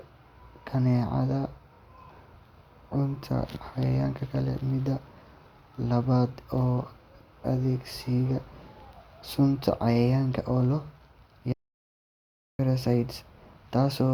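At 11.53 s the speech cuts to silence with no room tone for 1.06 s, an audio dropout to silence, likely from a lost input.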